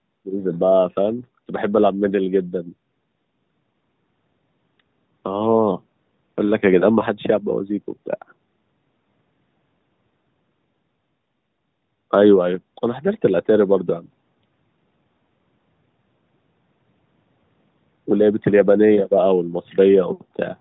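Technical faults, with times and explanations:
No technical faults are audible.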